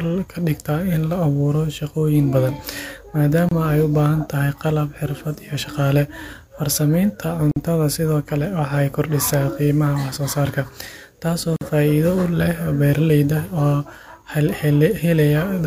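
At 3.49 s, 7.51 s and 11.56 s, the speech stops for about 27, 49 and 49 ms. These are gaps at a join of encoded pieces. Each segment was encoded separately and joined without trimming encoder delay or end padding. The gaps recur every 4 s with smeared edges, and the speech resumes exactly where it stopped, with nothing lost. That separates them from dropouts. The third gap follows "taasi oo", and "sidhokale waxay kordisa" follows the second.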